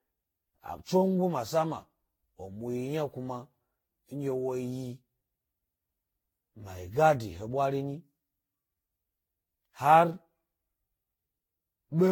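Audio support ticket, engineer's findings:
Swirly, hollow, smeared speech throughout, attacks blurred, nothing above 17.9 kHz. Generation loss, likely from around ten Vorbis-type re-encodes near 60 kbit/s, quantisation noise stacking each pass.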